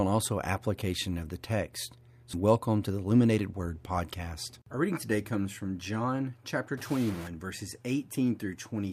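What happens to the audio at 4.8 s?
Nothing goes wrong at 4.8 s: the speech continues intact through that moment, with no dropout, click, distortion or other fault to be heard there.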